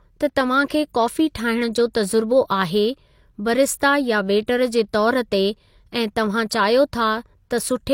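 Speech, and there's a bit of pre-echo right near the start, from about 0.68 to 0.70 s. Just ahead of a sharp onset you get a short hiss smeared across roughly 22 ms, so the attack arrives soft instead of crisp. That's the transform codec at work: the noise it budgeted for the loud hit gets spread over the whole block, including the quiet sliver before the transient lands.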